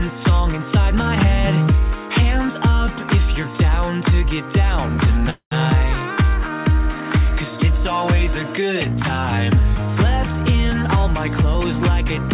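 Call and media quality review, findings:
Call audio freeze, 5.30 to 5.53 s: sound stalls, the last sound continues as a decaying buzz or hiss, then about 100 ms of silence before audio resumes where it stopped. Likely cause: delayed packets draining the jitter buffer. 214 ms inserted, nothing lost, so everything after runs 214 ms later. Spectrogram: smeared, repeating band fading to a blank column; waveform: shrinking envelope to flat line. Content above 4 kHz is absent throughout, consistent with the G.711 mu-law call path.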